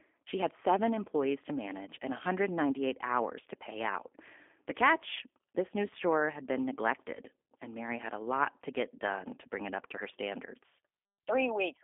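From start to finish the speech carries G.729 codec damage, consistent with an 8 kbit/s G.729A stream. The band runs from 250 Hz to 3.5 kHz, and the sparse-pulse excitation rebuilt through a vocal tract model leaves the speech plainly rough and synthetic.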